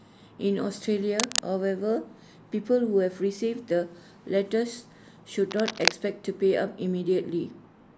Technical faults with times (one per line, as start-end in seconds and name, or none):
1.16-1.41 cable scratch noise
5.49-5.92 cable scratch noise